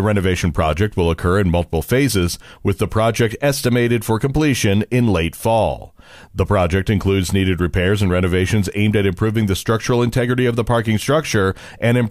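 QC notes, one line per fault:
No fault found in this speech clip.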